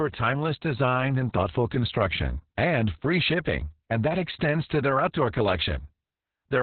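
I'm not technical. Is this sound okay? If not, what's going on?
No. The whole clip went through Opus voice compression squeezed very hard, in the speech-only mode, which keeps just a narrow telephone-like band and throws away everything above about 4.3 kHz. With so little room, the coder describes the voice's buzz only roughly. From start to finish the speech sounds muffled and dull, with a hoarse, slightly robotic edge, as if heard over a poor phone line.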